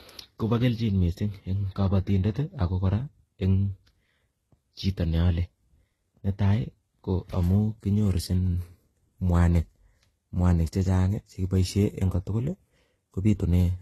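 Throughout this speech clip the top end stops abruptly, with nothing above about 12.3 kHz, and the sound carries two layers of coding damage at once. This is transcoding between lossy codecs, likely a low-rate HE-AAC pass around 16 kbit/s followed by Vorbis at about 43 kbit/s. The second encoder wastes bits re-encoding the first one's artefacts while adding its own, so both kinds of distortion are heard together.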